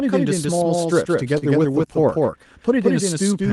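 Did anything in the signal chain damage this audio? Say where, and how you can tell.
Yes. A doubled audio track runs through the whole clip. A second full-band copy trails the original by roughly 150 ms, at about the same level. It has no decay and no room colour, so it is not an echo from a space. It sounds like a second capture path. The likely cause is the same signal being picked up twice, with one path lagging. It could also be an edit that layered two offset copies.

Between 1.38 s and 2.27 s there are repeated stalls (stutter). This is a network and jitter-buffer problem. Packets arrived late seven times, and each time the buffer ran dry. The receiver stretched the last sound to cover each gap. The gaps add up to 91 ms, about 12% of that span, and the longest is 34 ms. Nothing is lost. The audio just drags and hiccups.

From 3.13 s to 3.48 s there is a jitter buffer slow-down. The buffer was rebuilding its reserve. 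It did this by repeating single pitch periods or short bits of pause, over and over. That adds 51 ms, so the passage plays at about 87% speed. The pitch stays the same. Sounds are drawn out, with a slight warble at times.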